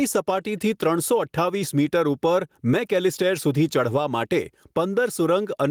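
Gain pumping runs through the whole speech clip. The level keeps breathing. The level rises in each pause, then drops away under every loud syllable, a swing of around 10 dB. Loud and quiet parts sit close together. The likely cause is gain set far too high, with a fast limiter clamping down on each peak.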